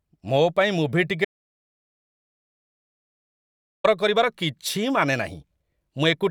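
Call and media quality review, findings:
Audio dropout to silence, 1.25–3.84 s: speech cut mid-flow, about 2.6 s of silence, no room tone, content lost. Likely input or link loss with recording continuing. Unlike gating or concealment, floor drops to nothing, not attenuated noise.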